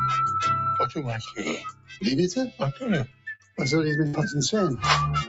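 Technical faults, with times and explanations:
Throughout: noise suppressor applied to music or sounds. The level keeps swelling and sinking by roughly 15 dB, so held material pumps and thins while sharp onsets stay fairly intact. A suppressor tuned for speech is misreading steady tones, ambience and decay as background noise and pulling them down whenever nothing sudden is happening. The result is an unstable, breathing texture. The call path's top end stopping at 8 kHz is a separate matter and sits under all of it.
0.87–2.03 s, 2.49–2.82 s, 3.06–3.59 s: sound cut by the noise suppressor. In these stretches the sustained part of the sound drops well below its surroundings, by about 19 dB, about 13 dB and about 18 dB at the deepest points, so tails collapse and held sounds fade early. The suppressor judged these steady passages to be noise and attenuated them hardest, for about a second in total in the first stretch and shorter spans in the other two.
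3.35 s: short concealed packet loss. A brief smear, about 40 ms long, is heard inside the third suppressed stretch. That much audio never reached the decoder in time. The receiver patched the hole with roughly 38 ms of synthesized continuation, extending whatever was sounding just before, then crossfaded back into the real signal. The join leaves a small wobble rather than a clean gap.
4.07–4.15 s: burst of packet loss. About 60 ms of audio goes missing here. In its place is roughly 62 ms of synthesized continuation that holds the previous sound and fades it down, so it comes across as a held buzz or a fading hiss. Several consecutive packets, or one long one, arrived too late or not at all. When playback resumes it has jumped ahead, and the material that belonged in the gap is absent.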